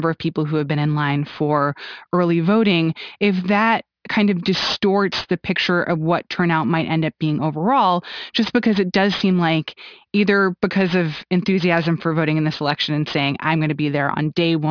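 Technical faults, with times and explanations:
Throughout: aliasing. The speech was brought down to a rate that fits 11 kHz with no filter first, so energy above the 5.5 kHz fold point reflects back as unrelated tones, roughly 20 dB under the signal. Sibilants turn gritty and metallic, unlike plain band-limiting, which would sound dull rather than harsh.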